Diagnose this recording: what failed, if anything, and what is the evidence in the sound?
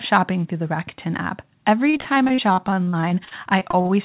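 Repeated packet loss (robotic sound) on the network, 1.9 to 3.91 s: about twenty holes, longest 45 ms, filled by stretching prior speech, giving choppy, robotic, 4 kHz-limited audio.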